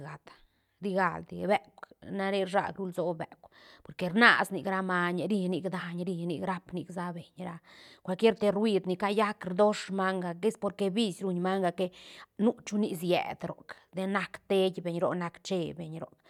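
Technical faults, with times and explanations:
No technical faults can be heard anywhere in this recording.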